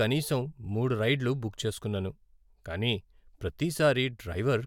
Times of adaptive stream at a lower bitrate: none

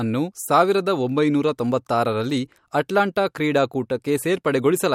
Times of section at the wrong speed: none

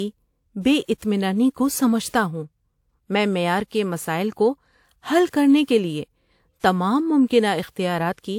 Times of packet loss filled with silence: none

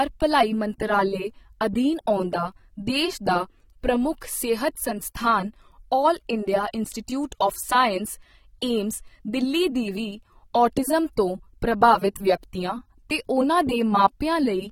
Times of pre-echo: 4.21

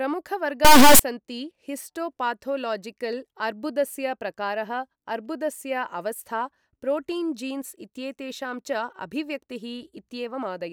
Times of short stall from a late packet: none

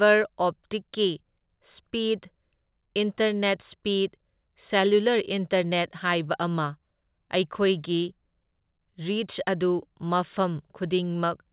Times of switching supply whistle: none

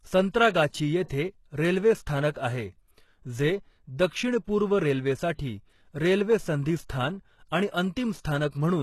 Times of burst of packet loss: none

